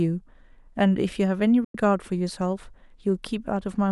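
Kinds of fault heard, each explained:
digital broadcast dropout: The speech abruptly falls silent at 1.64 s, fading out over about 3 ms rather than clicking, and comes back at 1.75 s, leaving a hole of roughly 100 ms. Whatever was said in that gap is simply missing, not smeared or repeated. This happens when the receiver loses the digital stream or rejects corrupted frames and mutes until valid ones arrive; a gap this size fits three lost frames of about 32 ms each.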